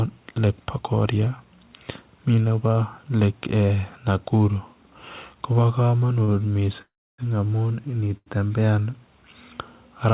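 At 6.24 s a short stall from a late packet occurs: a packet arrives late, the jitter buffer runs dry, and the receiver stretches the last sound for about 38 ms until the data turns up. The speech then resumes exactly where it left off, so nothing is lost, but the sound is briefly held. What sets it apart from a freeze is that no silence opens up, only a slightly drawn-out sound with a faint buzz or dip.

From 6.82 to 7.20 s there is a call audio freeze, likely caused by packets held up in transit. The receiver fills about 366 ms, continuing the last sound as a fading buzz or hiss that falls away to about 290 ms of silence. Speech then picks up from the same point, so a gap has been inserted rather than anything removed. The audible drop into silence is what distinguishes it from the brief stalls.

At 8.17 s a second short stall from a late packet holds the sound for about 89 ms, a longer stretch than the first. 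It still never reaches silence before the speech continues unbroken. Throughout, the call path is band-limited to nothing above 4 kHz, which fits a narrowband G.711 codec.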